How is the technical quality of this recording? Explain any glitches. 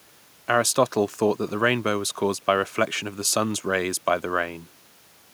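No audible glitches or faults.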